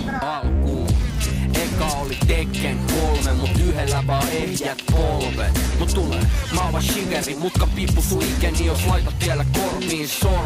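Nothing in the audio stood out as a technical fault on listening.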